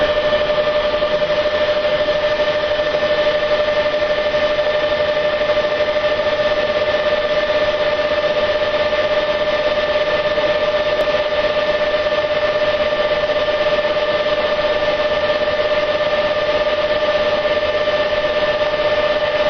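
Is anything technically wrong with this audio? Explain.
Yes. There is damaged data in a compressed stream at 1.07 to 1.13, 6.18 to 6.24, 11.01 to 11.06 and 14.45 to 14.50 s. The decoder misreads the corrupted frames and loses sync until the next header, leaving a brief glitch of about 50 to 60 ms, seen as a short broken strip across the spectrogram.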